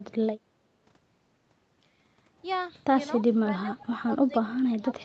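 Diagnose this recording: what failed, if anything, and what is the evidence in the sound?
Speech suppressed in double talk, in call processing: the echo canceller likely treated overlapping talk as echo, so the speech sinks by up to roughly 25 dB from 3.45 s onward.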